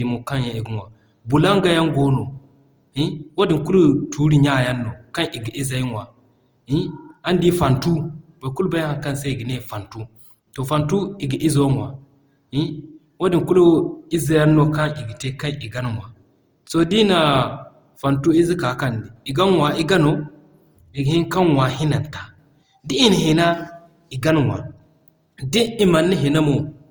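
It's a speech recording, and the whole thing has that swirly, smeared, hollow character of generation loss, more than you'd expect from the bandwidth alone, which still reaches about 20.2 kHz. Consonant onsets come out soft and blurred. That points to the audio likely having been pushed through a lossy codec a few times over, something like Opus at 48 kbit/s, with each re-encode quantising on a fresh frame grid so the noise stacks up.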